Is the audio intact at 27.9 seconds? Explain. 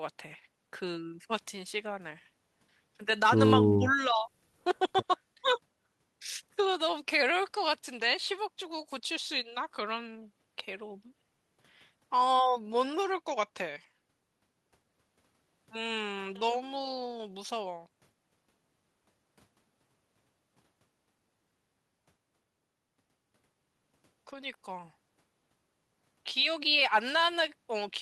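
Yes, at 27.9 seconds the audio is intact, with no fault at that moment.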